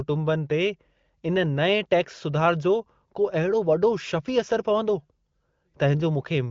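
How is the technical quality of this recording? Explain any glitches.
The technical quality is sound, with no glitches to explain, just the narrowed top end of wideband phone-call audio, which fits AMR-WB at around 15.85 kbit/s.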